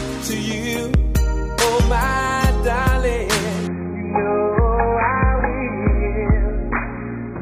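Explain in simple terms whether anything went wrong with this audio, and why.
Something did go wrong: from 3.67 s to the end, the sound suddenly turns dull and muffled, with nothing above about 2.5 kHz. That's an adaptive stream dropping to a lower bitrate, switching to a much leaner version with no gap when the connection slowed.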